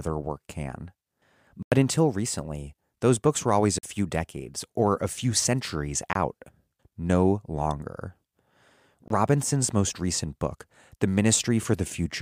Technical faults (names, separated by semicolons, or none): block of digital silence